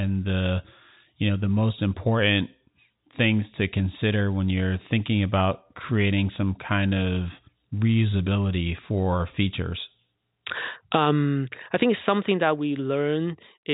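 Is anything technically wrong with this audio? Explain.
No, nothing's wrong here: it's speech carried over ordinary G.711 telephone coding, so the missing sound above about 3.8 kHz is simply how that phone-line format works.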